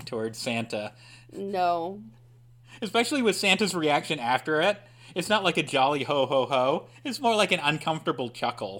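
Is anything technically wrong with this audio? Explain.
No, nothing is technically wrong with this audio.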